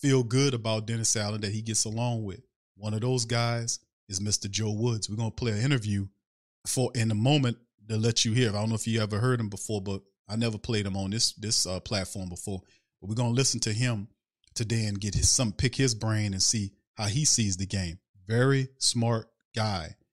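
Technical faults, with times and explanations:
Nothing in the speech stood out as a technical fault on listening.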